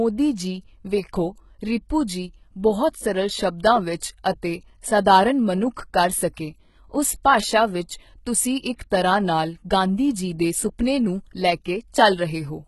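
From start to finish the treble sounds synthetic and gritty, with nothing above 11.8 kHz. The likely cause is heavy HE-AAC compression at a low bitrate, around 16 kbps. Only the lower band is coded, and the top is rebuilt by copying it upward, so s sounds turn metallic and lispy.

At 8.90 s a pre-echo appears: a short smear of hiss, about 12 ms, arrives just ahead of a sharp onset. The codec spread quantisation noise across its whole transform block, so the noise leaks into the quiet moment before the attack and softens it.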